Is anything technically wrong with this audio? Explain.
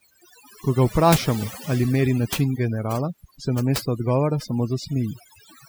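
Yes. Throughout the speech there is overdone noise removal: the reducer was set so aggressively that bands near its noise estimate are pulled almost to nothing, taking quiet speech detail with them. Pauses fall to near silence with twinkling specks. Unlike a gate, it works band by band rather than muting everything at once.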